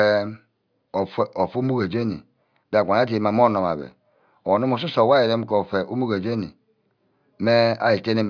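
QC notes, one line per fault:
Nothing to flag here; the speech comes through without any technical faults worth noting.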